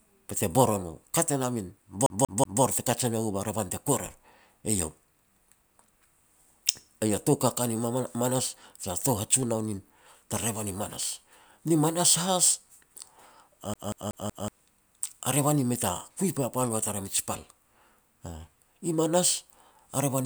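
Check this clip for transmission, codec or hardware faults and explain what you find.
Two bursts of a CD stuck on one turn, at 2.06 to 2.62 s and 13.74 to 14.48 s. A scratch throws the laser back a track, so a 0.19 s slice of speech repeats three and then four times, with a brief mute at each jump. The identical, evenly timed loops set it apart from packet-loss concealment, which stretches or fades the repeated audio.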